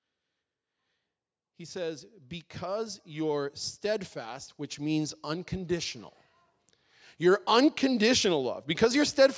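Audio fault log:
1.57–6.03 s, automatic gain rising: speech and background swell together by about 15 dB, a gradual gain climb rather than an abrupt level step.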